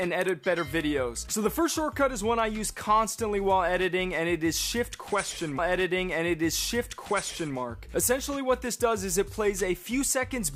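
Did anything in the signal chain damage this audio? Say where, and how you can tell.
Yes. At 5.58 s a small blip marks a jump back, and roughly 2 s of audio plays again through 7.57 s. This is a stream segment repeated at the streaming playback stage: the player fetched or queued the same chunk twice, inserting a 1.98 s duplicate.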